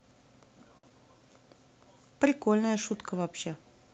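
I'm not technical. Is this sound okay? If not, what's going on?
No. There are two brief glitches in this speech, close together near the start.

The first is a short stall from a late packet, from 0.77 to 0.85 s. One piece of the call arrived late. The receiver's waiting store ran dry, so it stretched the last sound for about 59 ms until the piece turned up. Nothing was lost. You hear a sound held a touch too long, perhaps with a faint buzz or dip.

The second is a short concealed packet loss, from 0.89 to 0.92 s. This time about 40 ms of audio never arrived in time to be used. The receiver filled the gap by continuing the last sound, then blended back into the real audio. The delay also shrank by a few hundredths of a second here. It sounds like a quick smear or wobble, and a short sound may drop out.

Both come through a call-style connection using the Opus codec, which keeps sound up to about 8 kHz.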